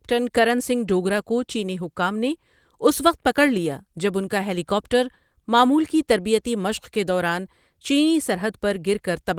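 No technical faults can be heard in this speech clip. The Opus voice compression sounds like hybrid coding at a rate that fits about 20 kbps, keeping the full band up to about 20.4 kHz and leaving only light traces of the codec.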